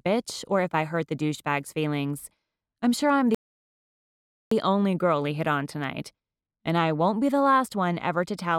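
At 3.35 s the sound stops dead and gives way to silence. This is a rebuffering stall. The player used up the audio it had downloaded and had to wait for more to arrive. The gap lasts about 1.17 s, until 4.51 s. Then playback picks up at exactly the point where it broke off. Nothing is skipped or repeated. The stall simply inserts extra silent time into the clip.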